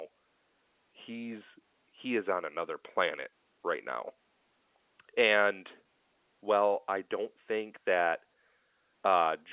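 The speech carries no technical faults, and its telephone-band sound, with nothing above 4 kHz, fits a working A-law G.711 path at 8 kHz.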